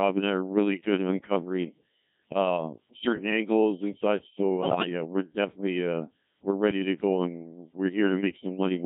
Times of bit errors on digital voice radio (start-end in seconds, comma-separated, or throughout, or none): 4.61-4.86